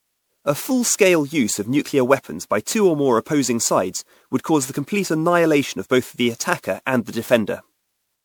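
From start to finish the speech has a swirly, watery texture. Consonant onsets are smeared, and the tone is hollow. The damage is heavier than a single 128 kbit/s MP3 pass would explain. The likely cause is generation loss: the audio was decoded and re-encoded with MP3 around ten times. Each pass quantised it again on a shifted frame grid, so noise and spectral gaps built up.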